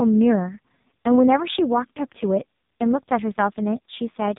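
From start to finish, the speech carries the sound of the AMR narrowband mobile codec. Nothing passes above about 3.8 kHz. Each 20 ms frame is rebuilt from a vocal-tract model and a few pulses. The damage is heavy, which fits the lowest 4.75 kbps mode. The voice sounds buzzy and synthetic.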